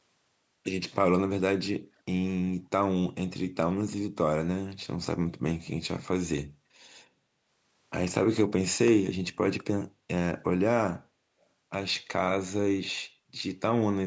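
A faint, delayed scrap of the speech returns at 11.41 to 11.46 s, trailing the original by about 325 ms and sitting far below it. This echo leak is likely a far-end loudspeaker's sound getting past that side's echo canceller and being sent back.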